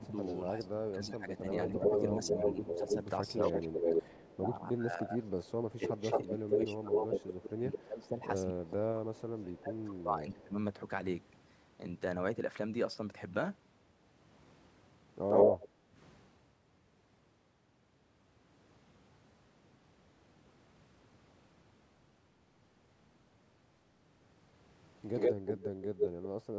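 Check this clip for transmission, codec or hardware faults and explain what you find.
The trouble here is all echo-canceller behaviour on a speech call: double-talk suppression in the first ten seconds, several patches of echo leak, and one brief dip in the background.

From 0.0 to 10.57 s there's speech suppressed in double talk. The voice keeps sinking, by up to around 20 dB at its worst, and about seven seconds of that stretch is affected in total. The likely cause is both ends talking at once: the canceller couldn't tell the local talker from the loudspeaker echo, so it clamped down on everything.

Echo leak turns up three times. From 0.08 to 9.22 s there's a copy of the voice trailing 242 ms behind, sitting roughly 5 dB off the speech level. Then it appears briefly from 15.28 to 15.68 s, and again from 25.14 to 26.25 s. Both of those later bits lag 116 ms, the first roughly 10 dB down and the last roughly 5 dB down. 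That's likely a speakerphone whose canceller didn't scrub out everything its mic caught, so the residue got sent back down the line.

Right after that middle echo, from 15.68 to 15.95 s, the background is gated by the echo canceller. The room tone drops by about 9 dB for roughly 300 ms, then comes back. The canceller slammed the mic down while the loudspeaker was active and let go a moment later, which is why the ambience briefly dips. The call's mic processing also shows up as nothing above 8 kHz, which is normal for this path.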